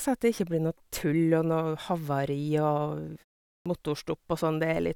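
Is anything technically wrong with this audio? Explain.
Yes. At 3.59 s, speech bursts in abruptly with its first 66 ms missing. This is a clipped start after a pause: the output device sleeps through 0.43 s of silence and wakes too slowly.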